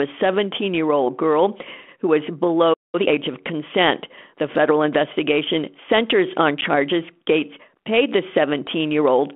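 Speech carried over a G.726 ADPCM telephone link at 32 kbit/s, its band limited to roughly 250 Hz to 3.4 kHz with only light codec roughness, contains three faults. A playback stall begins at 2.73 s, right after "girl who was below": the audio cuts out mid-flow and stays silent for about 0.2 s until 2.95 s. This is likely the player running short of buffered data or having its output thread blocked, so nothing reached the output until it recovered. Time-compressed catch-up follows immediately, from 2.95 to 3.13 s, ending at "of consent". To recover the backlog, the player drops short segments and cross-fades the joins, so the audio runs at about twice normal speed while keeping its pitch. The stream is back in step after roughly 0.18 s. At 6.61 s, just after "federal investigation centers on", there is packet loss on the ADPCM call. About 10 ms of audio, roughly one packet, is replaced by a hard-edged gap. 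Because ADPCM transmits differences from an adaptive prediction, the receiver's predictor and step size no longer match the sender's. The speech therefore returns slightly distorted and settles by about 6.64 s.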